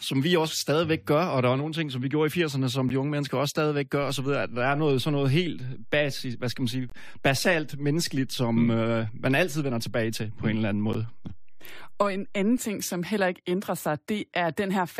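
At 2.89 s the speech breaks for about 11 ms: a gap between stream segments, where the timestamps of adjacent 4-second segments leave a hole that playback fills with hard-edged silence. The same dropout recurs at 6.90–6.92 s (20 ms) and 10.93 s (about 12 ms), spaced at the segment interval.

At 4.03 s a DC step shifts the waveform's zero line, heard as a low thump while the speech continues unchanged. The offset lasts until 12.58 s.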